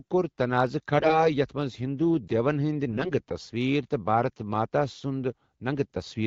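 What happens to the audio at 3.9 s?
Nothing goes wrong at 3.9 s; the speech there comes through intact, carried cleanly by the AMR wideband (HD Voice) codec at 12.65 kbit/s.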